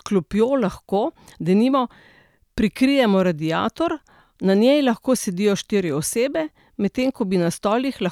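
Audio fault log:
Nothing to log here, since no faults turn up anywhere in the recording.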